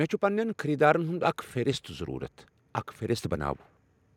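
From 0.2 to 2.37 s, automatic gain rising: the gain control judged the input too quiet and lifted it by about 4 dB, so speech and background swell together.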